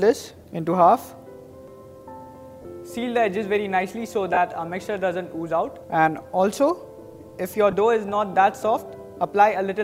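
Lost LE Audio frames cause three short dropouts, at 2.62 to 2.65 s, 4.34 to 4.37 s and 7.71 to 7.73 s, lasting about 30, 30 and 20 ms, which fits runs of two or three 10 ms frames. Each gap is filled by the LC3 decoder repeating the last good spectrum with randomised signs, so any steady tone there turns into a brief noisy smear rather than true silence.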